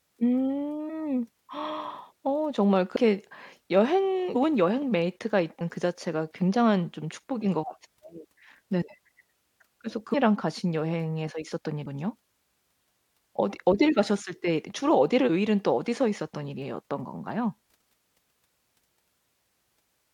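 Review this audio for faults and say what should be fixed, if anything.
The speech jumps ahead seven times, at 0.88, 2.95, 4.34, 5.60, 10.13, 11.84 and 15.28 s. These are compressed frames skipped. Whole coded frames never reach the output, so the audio leaps forward. Each frame lasts 23.2 ms. Most jumps lose around 100 to 200 ms. The one at 15.28 s loses about half a second. Prevent it by checking the file for damage and re-encoding from a clean source.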